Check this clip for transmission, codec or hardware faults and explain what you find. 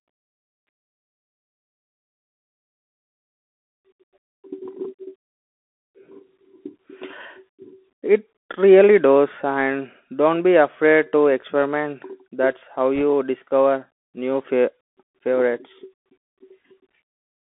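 Two faults are audible: a Bluetooth headset codec across the whole speech clip, and a short burst of link errors near the end.

Throughout, the Bluetooth CVSD headset codec confines the speech to roughly 250 Hz to 3.5 kHz, consistent with a 64 kbps CVSD stream. Each sample is coded as a single up-or-down step of adaptive size, so a granular hiss sits under the voice and loud high sibilants outrun the step and turn scratchy. That hiss and slope distortion separate it from simple telephone band-limiting.

From 12.96 to 13.03 s, just after "that's how", bit errors on a Bluetooth voice link add a brief rushing crackle at an error rate around one percent. Because each flipped CVSD bit nudges the signal by only one step, sized with the speech level, and the error fades, there are no sharp clicks or silent gaps, which distinguishes it from packet loss.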